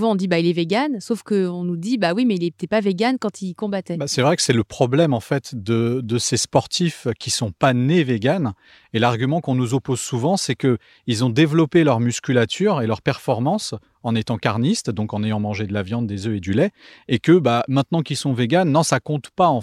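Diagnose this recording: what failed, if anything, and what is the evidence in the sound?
Nothing failed: the recording shows no fault at any stage, and there is no evidence of one anywhere in the sound.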